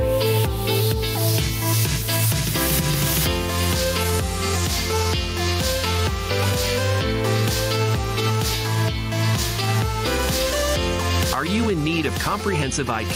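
Gain pumping runs through the whole clip. The level keeps being hauled down on each loud moment and recovering in between, swinging by around 10 dB, so loud and quiet parts sit squashed together. The likely cause is input gain set far too high, with a fast limiter or compressor clamping every peak.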